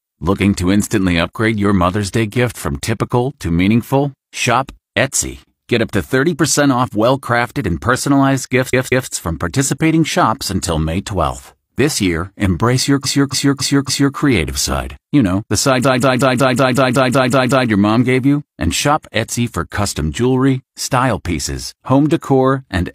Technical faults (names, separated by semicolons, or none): repeated frames